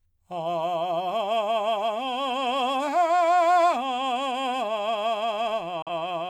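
At 5.82 s the music drops out in a digital broadcast dropout, returning at 5.88 s. The receiver muted after losing a frame, with a fast fade of about 3 ms. The lost audio amounts to about 43 ms, which fits a single lost frame. Unlike a buffer underrun, there is clean silence rather than a click or repeated fragment.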